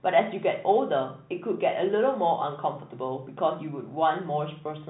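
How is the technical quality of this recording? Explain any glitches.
No glitches to report: the speech sits in the G.711 telephone band, with the top end stopping near 3.9 kHz as that format requires and any coding grain faint at most.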